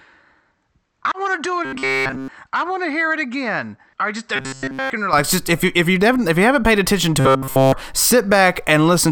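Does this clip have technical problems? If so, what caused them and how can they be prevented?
Yes. For the first 5.13 seconds, from 0.0 s, the speech sounds dull and boxy, with a level about 10 dB lower and its own faint background noise, roughly 55 dB below the voice. At 5.13 s it opens up cleanly with no gap, which points to an input switched to a poorer device, likely a headset's call profile or a lesser microphone. To prevent it, lock the recording input in the system and app settings so it can't hop devices.

There's also robotic sound from repeated short buffers in three spots: 1.65 to 2.28 s, 4.36 to 4.90 s, and 7.20 to 7.73 s, right after "you haven't paid attention". In each stretch essentially all of the audio is a repeat of one tiny chunk, which puts a rigid metallic buzz at 133 Hz over the voice. That rate fits a chunk about 7.5 ms long being looped while fresh audio fails to arrive. 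To prevent it, use a larger buffer and ease the CPU or network load so audio keeps arriving on time.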